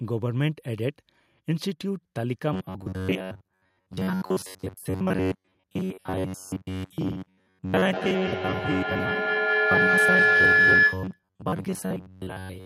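Robotic sound from repeated short buffers runs from 2.53 s to 12.66 s: the speech hardens into a rigid metallic buzz at 93.8 Hz. The likely cause is audio arriving too seldom, with the last 10.7 ms slice replayed over skipped sound for most of that stretch.

Feedback howl sets in from 7.75 s to 11.24 s, when a microphone-to-loudspeaker loop gains level on each pass. Its repeats narrow to a tone around 1.5 kHz, pulsing roughly every fifth of a second and peaking about 7 dB above the speech.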